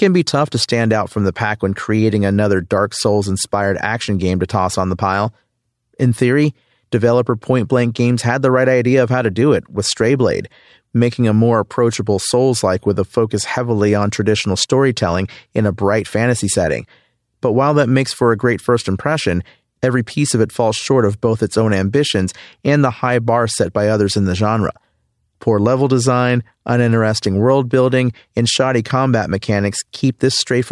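Speech recording with no audible technical faults anywhere in the clip.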